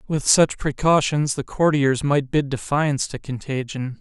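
Nothing in this recording trips the ear as a technical fault: no dropouts, glitches or other defects turn up anywhere along the way.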